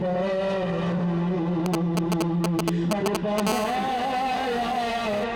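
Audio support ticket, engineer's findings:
GSM signalling bursts, 1.66 to 3.40 s. Galloping dit-dit-dit of short buzzes at about 217 Hz, roughly as loud as the audio itself. Probable component: a 2G phone close to the gear, sending short signalling groups of radio bursts rather than a steady stream. Mechanism: the audio circuit rectifies the RF pulses into the baseband, so the burst pattern comes out as audible buzz packets riding over the audio. Worth asking who had a handset near the rig.

GSM phone buzz, 3.47 to 5.24 s. Continuous hard, raspy buzz at about 217 Hz with lots of harmonics, sitting about 10 dB below the audio and unrelated to it. Probable component: a 2G phone, now in a call and transmitting its bursts 217 times a second. Mechanism: the circuit picks up the RF and rectifies the pulse train, and the burst rate becomes the buzz fundamental. Move the phone away, check shielding.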